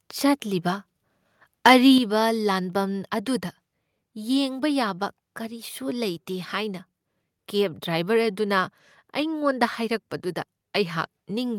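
From 1.65 to 1.73 s the input level likely ran past the converter's limit by about 7 dB, a case of microphone overload. The tops of the loudest peaks, a few percent of the samples, are flattened, giving that stretch of speech a harsh, crackling edge.

At 1.98 s the microphone volume was stepped down, likely by call software reacting to that clipped peak and cutting the device's input gain by 6 dB in a single move. Voice and background drop together, abruptly, to a noticeably quieter level.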